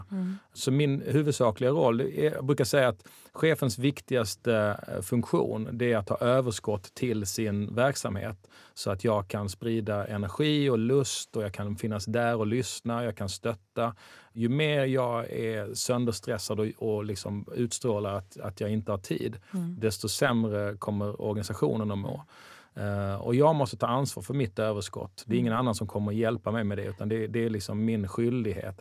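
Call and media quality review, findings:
No audible faults found in the speech signal: level, continuity and timing hold steady throughout, with nothing to attribute to any component in the chain.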